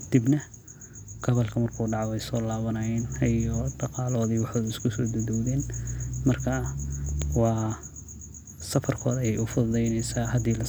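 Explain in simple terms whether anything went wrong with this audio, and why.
Nothing went wrong with this recording of speech; listening closely, there is no technical fault anywhere in it. The sound holds steady throughout, with no sudden breaks, jumps or changes that would point to a problem.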